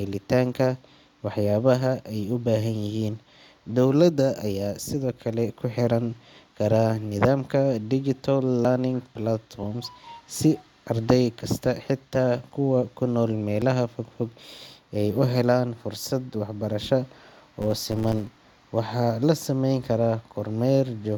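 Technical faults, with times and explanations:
3.65, 8.65, 13.62, 18.61 s: overlap between stream segments. At these joins between 1-second segments, overlapping timestamps make the player discard a few milliseconds of real audio, so the speech jumps. The waveform shows a sudden step, and the spectrogram a thin full-height vertical line.
17.62 to 18.42 s: filter restarted on every block. The filter restarts from silence on each block, leaving a small transient every 10 ms and a 100 Hz buzz that tracks the speech level. The waveform shows evenly spaced spikes, and the spectrogram shows a harmonic comb on 100 Hz.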